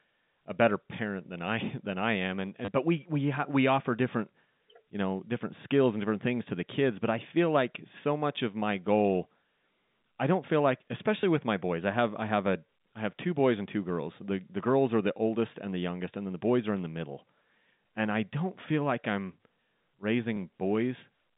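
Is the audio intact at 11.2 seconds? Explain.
No. Packet loss with last packet repeated occurs from 11.21 to 11.23 s. About 20 ms of audio went missing, which fits two lost 10 ms packets. The receiver filled the gap by replaying the last packet it had received until new data arrived. The repeated segment produces a brief, robotic stutter.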